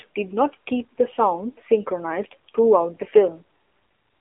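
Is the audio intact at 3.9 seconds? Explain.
No. At 3.9 seconds, as throughout the clip, the speech sounds narrow, boxy and buzzily synthetic, confined to roughly 300 Hz to 3.4 kHz. This is AMR narrowband mobile codec damage: vocal-tract modelling at a low bitrate, which fits about 7.4 kbps.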